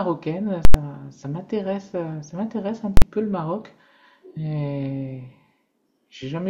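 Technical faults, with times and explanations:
0.65–0.74 s and 2.97–3.02 s: invalid numbers at full scale. A processing stage produced infinite or invalid values, which were clamped to the maximum sample value and held for a whole block. The first run lasts about 93 ms, which fits a 4096-sample block, and is heard as a sharp pop where the output jumps to full scale, silence while it is pinned there, and a second pop as it drops back. The second run lasts about 46 ms, which fits a 2048-sample block, and the two edges come close enough together to sound almost like one hard bang.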